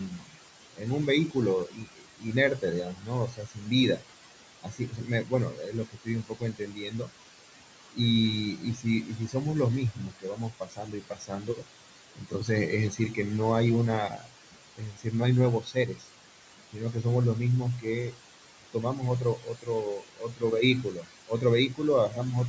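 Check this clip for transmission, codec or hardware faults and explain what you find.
The faults here come from an aggressive noise suppressor, not the codec or the link: steady artefacts across the whole clip, plus repeated bites out of the speech itself.

Noise suppressor artifacts run from start to finish. The suppressor estimates which frequency bands hold steady background noise and pulls them down frame by frame, here by about 18 dB. The room noise, which sits about 13 dB below the speech, dips away in the gaps and swells back under the talking.

Speech cut by the noise suppressor shows up eight times: 0.09–4.04 s, 4.63–7.12 s, 8.57–9.35 s, 9.95–13.18 s, 14.09–16.09 s, 16.73–17.05 s, 17.79–18.20 s and 18.73–22.18 s. The suppressor mistook quieter parts of the speech for noise and turned them down with the background, by up to about 19 dB at the deepest. It's patchy within each stretch, from a brief moment to well over a second in the longer spans, so softer sounds and word endings come out swallowed or faint. 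The call microphone path's band limit, with nothing above 8 kHz, is normal.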